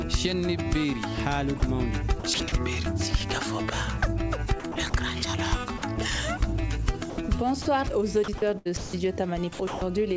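The audio is cut four times by sound dropped by the voice detector: at 1.60 to 1.62 s, 5.78 to 5.82 s, 7.10 to 7.18 s and 7.62 to 7.66 s. Each gap lasts 20 to 80 ms. The sound briefly gives way to comfort noise in place of the real signal and then returns. The likely cause is a sender-side detector that judged quiet material to be background and stopped transmitting, while the receiver filled the pause with comfort noise. Four longer stretches show sound chopped by the voice detector: 2.20 to 2.52 s, 4.60 to 4.94 s, 8.24 to 8.93 s and 9.53 to 9.81 s. Within these, 120 to 314 ms of sound is replaced in pieces. The result is choppy. The likely cause is the detector toggling on and off repeatedly, with comfort noise filling each off period. Nothing is heard above 8 kHz, which fits a G.722 call path at 64 kbps.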